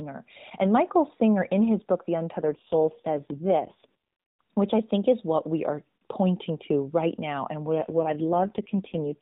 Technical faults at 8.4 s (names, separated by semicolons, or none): AMR rate drop